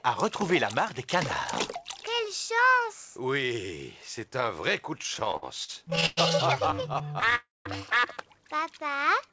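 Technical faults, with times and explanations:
4.98–6.19 s and 6.67–7.33 s: repeated stalls (stutter). The sound keeps halting and resuming, thirteen times in each span. Packets reached the receiver more slowly than they played, so its buffer kept emptying. Each pause was filled by extending the last sound. The first span's longest pause was 110 ms, and about a quarter of it is filler. The second span's pauses are brief, around 14 ms at most, and about a fifth of it is filler. Nothing is lost, but the sound drags and jerks.
7.35–7.67 s: call audio freeze. The sound stops dead for about 300 ms. It is first carried on as a fading continuation of the last sound, then falls to silence for roughly 200 ms. The likely cause is packets held up in transit, adding 300 ms of delay. Playback then resumes where it left off, so a gap is inserted rather than anything cut.
8.84–9.31 s: jitter buffer slow-down. 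The final half-second runs at about 94 % speed with the pitch unchanged. The receiver stretched the sound by 36 ms, repeating tiny periods to rebuild its reserve. The result is slightly drawn out.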